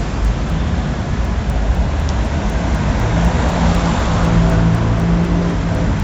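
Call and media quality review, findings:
Resampler restarted on every block: regular ticks at 4 per second, throughout, only while sound is present. Sample-rate conversion, 16 kHz to 48 kHz, run on each 250 ms block separately, so every block edge gets a small interpolation error. Unlike underrun or packet-loss clicks, the spacing is strictly periodic, nothing is missing, and the ticks vanish in silence.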